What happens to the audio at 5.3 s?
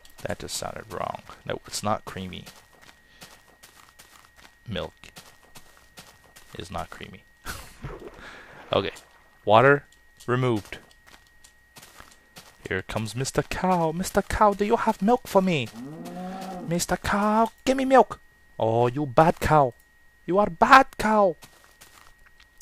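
Nothing goes wrong at 5.3 s; the audio there plays through cleanly, with no dropout, click, distortion or other technical fault.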